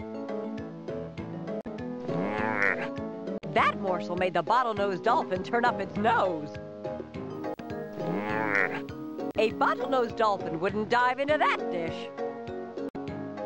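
From 7.34 to 10.11 s a low buzz at 59.94 Hz appears, topped with hash and a faint, very high tone near 15.7 kHz, sitting well below the sound. This is video or display buzz: a screen or video cable coupling its field and line rates into the audio.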